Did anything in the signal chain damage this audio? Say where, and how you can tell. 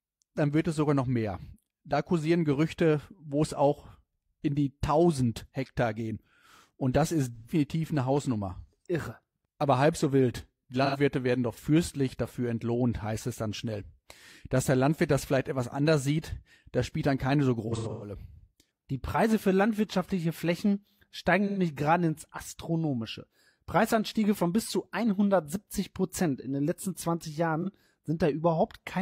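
Yes, at the codec: AAC frame loss with concealment. Smeared, phasey patches occur at 7.36 s after "das ist", 10.84 s before "werden doch fürstlich dafür", 21.47 s before "gerade ins", 27.61 s, and scattered through 17.67–18.12 s, where the decoder filled missing frames from the last good spectrum.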